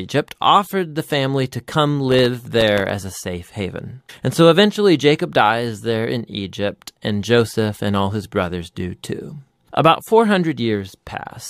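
From 2.00 to 2.95 s, after "the family to come" and before "a safe haven", processor overload crackle: around twenty sub-millisecond buffers miss their deadlines, leaving silent gaps that tear the speech into gritty crackle.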